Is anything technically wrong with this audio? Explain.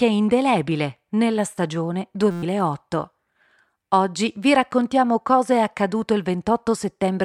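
Yes. From 2.31 to 2.43 s, just after "indelebile nella stagione", the speech gives way to a steady buzz pitched at about 172 Hz, and roughly a tenth of a second of audio is missing. This is a system hang loop: the computer or driver stalled while the sound hardware kept replaying its ring buffer. A single 5.8 ms slice, which fits a 256-sample buffer, repeated about 20 times, and the loop rate is what you hear as the buzz.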